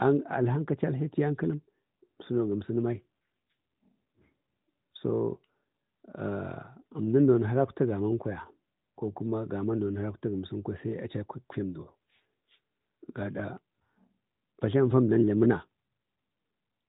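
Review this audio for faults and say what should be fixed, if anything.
From 2.92 to 4.20 s an AMR rate drop makes the speech rougher and more synthetic, with no gap. The sound points to a fall from about 12.2 to 5.9 kbps. Improving radio coverage keeps the codec at its higher rate.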